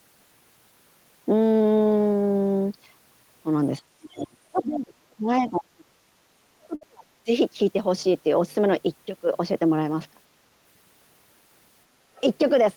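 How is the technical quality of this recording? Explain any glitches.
The recording has several audible glitches, clustered between about 3.8 and 7.3 s and again near the end.

Speech suppressed in double talk: From 3.80 to 5.87 s the speech repeatedly dips and breaks up, about 1.5 s in total, dropping by roughly 30 dB at worst. From 6.27 to 7.07 s it happens again, about 0.7 s in total and deeper, near 40 dB. A brief dip of about 15 dB follows at 7.25 s. The likely cause is an echo canceller that could not tell this talker from the far end's echo while both spoke and attenuated everything.

Other side's voice leaking through: A faint scrap of a second voice appears from 4.19 to 4.24 s, about 20 dB below the speech, and another from 12.16 to 12.21 s, about 30 dB down. Each is a short fragment. The likely cause is that the far end playing over the loudspeaker was picked up by the microphone, and echo cancellation left a residue.

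Burst of packet loss: From 6.75 to 6.83 s, inside the second suppressed stretch, the sound holds and fades for about 57 ms, then jumps ahead. About 60 ms of audio is missing. The receiver stretched the last received sound while turning it down to cover the lost packets, so the sound smears into a decaying tail before resuming further on.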